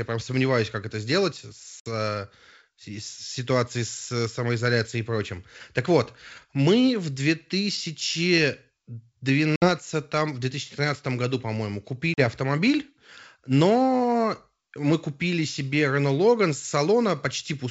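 Packet loss on an ADPCM call leaves hard-edged silent holes at 1.80–1.90 s, right after "сомневаюсь как это сделать", then 9.56–9.69 s and 12.14–12.21 s (60, 60 and 40 ms lost). Unlike a clean dropout, the sound resumes with brief distortion while the G.722 decoder's predictor and step size resynchronise.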